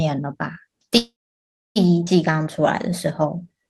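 A speech recording with four network-playback faults. From 0.97 to 1.79 s there is a call audio freeze: the last sound is briefly held as a fading buzz or hiss, then about 0.64 s of silence, after which speech resumes where it stopped, with nothing lost. The likely cause is packets stalling in transit until the jitter buffer emptied. A skip ahead follows at 2.06 to 2.1 s. Here, unlike the freeze, there is almost no gap but roughly half a second of speech is gone, with the two sides butted together as audio was dropped while later audio was already waiting. Two jitter buffer slow-downs come next. From 2.32 to 2.91 s speech runs at 93% speed with 51 ms added, and from 3.36 to 3.65 s at 86% with 50 ms added. Repeated pitch periods draw sounds out but keep the pitch steady, and unlike the freeze there is no break.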